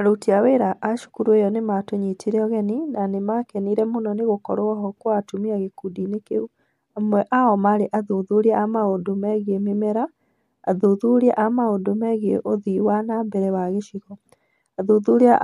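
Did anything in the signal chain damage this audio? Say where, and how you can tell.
No, nothing along the chain from capture to playback has left an audible mark on this speech recording.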